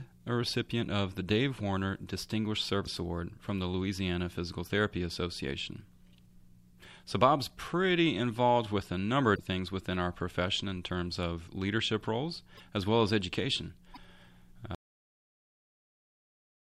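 At 2.85, 9.35, 12.57 and 13.93 s the sound jumps ahead with brief garbled glitches of roughly 26 to 40 ms, likely a broken MP3 bit reservoir. Unlike a plain dropout, the frames right after the skip decode into corrupted content, consistent with 24 ms frames. At 14.75 s there is a cut-off end: the sound stops mid-event and drops straight into digital silence, with no decay tail as there would be with a fade.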